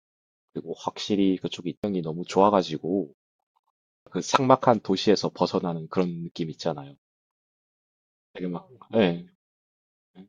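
Brief glitches break into the speech at 1.84 s and 4.07 s, the signature of damaged data in a compressed stream, where corrupted frames make the decoder lose sync.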